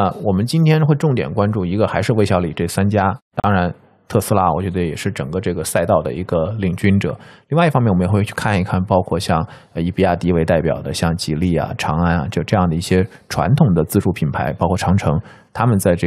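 At 3.40 s the speech drops out for about 39 ms, until 3.44 s, in a gap at a join of encoded pieces. The audio was evidently encoded as separate segments and spliced without trimming, so the encoder's start-up delay and the padding on the last frame of the earlier segment remain as silence. The gap's edges are smeared by the codec, and the speech then resumes exactly where it broke off.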